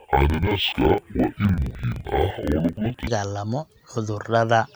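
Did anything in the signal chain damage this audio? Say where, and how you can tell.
Yes: interleaved audio read as planar, 0.0–3.07 s, in sample-format conversion; each 42.67 ms block splits into half-speed halves, an octave low, doubled, choppy.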